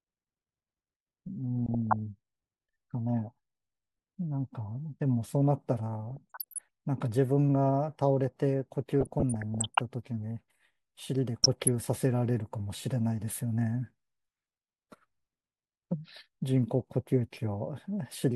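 DAB burbling breaks into the speech at 1.66 to 1.96 s, 6.08 to 6.66 s, 8.90 to 9.79 s and 11.43 to 11.68 s. Weak reception lets bit errors slip past error correction into the MP2 data, with a rate around half a percent. Corrupted samples add short blips of noise in single sub-bands and corrupted scale factors make individual sub-bands leap in level for up to a frame, which fits a few dozen frames damaged in the longest burst. Each burst comes out as burbling over the speech.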